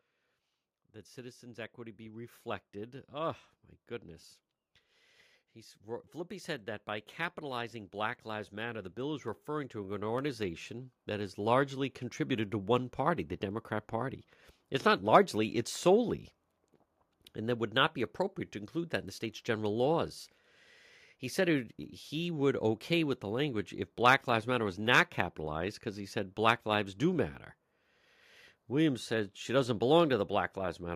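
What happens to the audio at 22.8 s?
At 22.8 s the speech continues intact, with no dropout, click, distortion or other fault at that moment.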